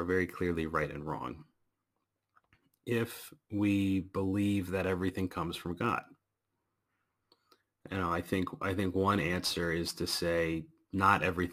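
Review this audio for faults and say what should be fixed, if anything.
Crude rate conversion runs throughout the speech: nearest-sample picking, consistent with a 48 kHz to 44.1 kHz change, leaves a gritty inharmonic fizz roughly 25 dB below the voice. Resample from the original with a properly filtered, band-limited converter.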